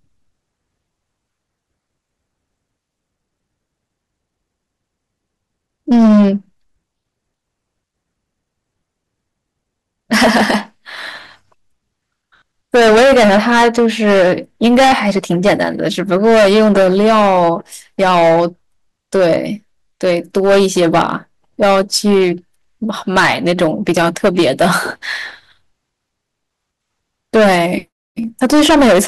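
A harsh, gritty fuzz sits on every loud syllable of this speech clip from start to finish. That is hard clipping: the level was driven about 15 dB past what the stage could pass, so around 7 percent of the waveform has its peaks sheared flat, adding high harmonics.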